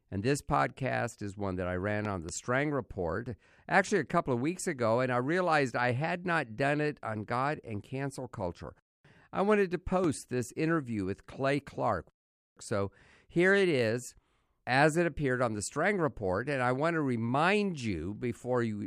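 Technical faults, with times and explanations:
2.05–2.31 s, loud pop: Just after "one that I ran", a brief voltage spike, likely from a plug, switch or static discharge, enters the signal path twice. The pulses are shaped by the following circuitry into two sharp pops about 5 dB above the speech, which continues underneath.
10.04–10.06 s, loud pop: Between "I wanted to" and "this interview with", a single electrical transient, likely a switching or driver glitch, is added to the signal. It comes through as one abrupt pop about 10 dB louder than the speech, which runs on underneath.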